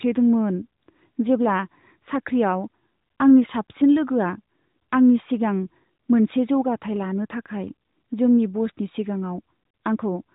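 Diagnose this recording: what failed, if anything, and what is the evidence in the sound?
Nothing failed: the speech arrives band-limited to roughly 3.8 kHz, as expected of an AMR narrowband mobile path working normally, and no stage in the chain shows a fault.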